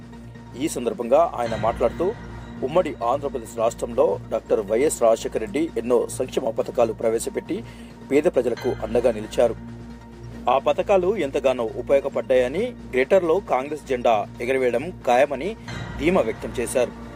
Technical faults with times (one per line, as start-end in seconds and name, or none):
0.39-16.54 clock drift buffer slips